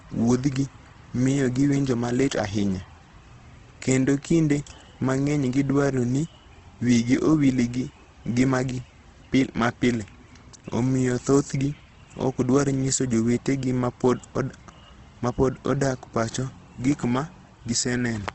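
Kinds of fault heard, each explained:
Opus compression: speech turns grainy and rough; a spectrogram shows noise-filled bands and a hard ceiling at 8.2 kHz, likely from low-bitrate Opus in its music mode.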